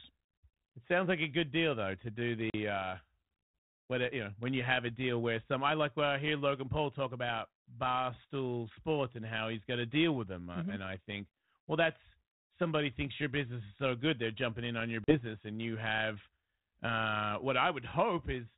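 At 2.5 to 2.55 s and again at 15.04 to 15.16 s the audio drops into abrupt, hard-edged silence of about 40 ms each, roughly a couple of packets lost. This is packet loss on an ADPCM call: once audio resumes, the decoder's predictor and step size no longer match the sender's, so the speech comes back with brief distortion that clears within tens of milliseconds. The light coding texture fits G.726 at 32 kbit/s.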